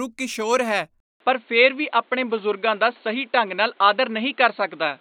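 After "ਕਿਸ਼ੋਰ ਹੈ", at 1.00 s, a 0.2 s gap gives way to dull, boxy speech capped at 4.4 kHz, with shifted level and faint background noise: likely an input switched to a poorer device.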